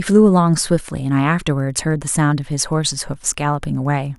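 Throughout the speech, the audio circuitry is picking up and rectifying the beacon transmissions of a nearby Wi-Fi radio. This is Wi-Fi interference. The beacon repeats every 102.4 ms, which puts a steady, faint ticking under the speech ten times a second, about 50 dB below it.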